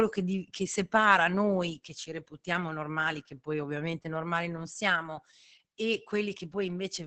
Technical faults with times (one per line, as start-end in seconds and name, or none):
0.00-7.07 Opus voice compression